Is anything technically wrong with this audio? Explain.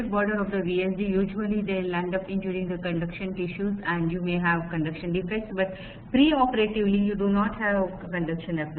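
Yes. DAB burbling at 2.62 s and 5.49 s: weak reception lets a small fraction of bit errors past the error correction, putting brief blips of noise into single sub-bands.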